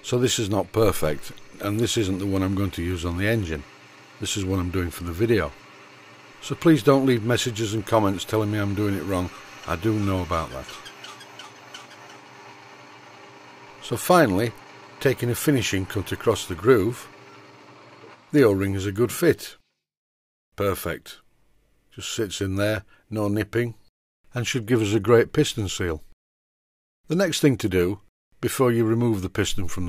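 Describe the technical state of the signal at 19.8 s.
The signal at 19.8 s is intact, with no audible fault at that moment.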